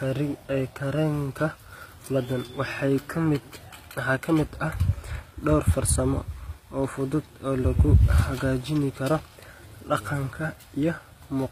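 From start to finish the speech carries obvious codec damage. The s sounds come out gritty and metallic, and nothing survives above about 15.4 kHz. That pattern is likely HE-AAC compression at a low rate, something around 24 kbps. The codec keeps only the lower spectrum and fakes the treble by copying lower bands upward under a rough envelope, so the upper harmonics don't line up with what's underneath.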